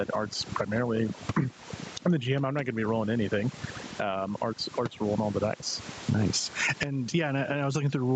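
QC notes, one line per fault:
Throughout: overdone noise removal. The background drops and breaks up, with small twinkling specks left in the gaps. Bands close to the noise estimate are cut hard, and quiet parts of the voice go with them.
Throughout: gain pumping. The gain swings by around 20 dB. Loud and soft parts sit close in level, so the sound is squashed. The likely cause is input gain set far too high, with a fast limiter pulling it down.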